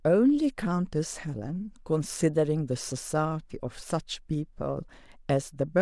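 No technical faults can be heard in the clip, so there is nothing to describe in time order.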